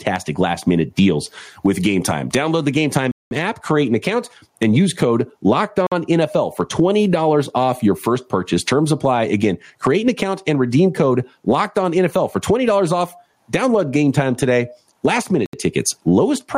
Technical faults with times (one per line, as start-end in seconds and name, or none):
0.00-16.57 gain pumping
3.11-3.31 Bluetooth stall
5.87-5.92 Bluetooth stall
15.46-15.53 Bluetooth stall